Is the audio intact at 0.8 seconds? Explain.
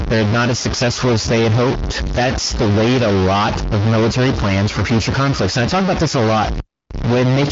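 No. At 0.8 seconds, as across the whole clip, the sound is distorted, with noise in the pauses. The likely cause is a stuck bit: one data bit held at a fixed value shifts about half the samples by its weight and flips around zero.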